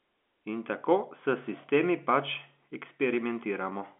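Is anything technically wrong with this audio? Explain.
No, there are no faults.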